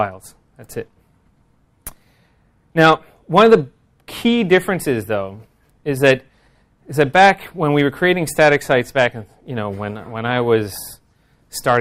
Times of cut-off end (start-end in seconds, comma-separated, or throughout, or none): none